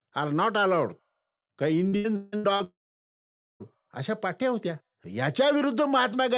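From 1.88 to 2.63 s, repeated packet loss chops the speech. Five short gaps, the longest 161 ms, are patched by stretching earlier sound, giving a choppy, broken texture.

From 2.64 to 3.63 s, the speech drops out entirely. A brief fading buzz gives way to 0.85 s of silence, likely a long network dropout.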